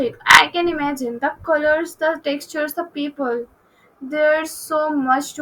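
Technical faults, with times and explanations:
0.29–0.41 s, repeated frames: the same 40 ms block of compressed speech replays twice more, heard as a stutter that lengthens the audio by 80 ms.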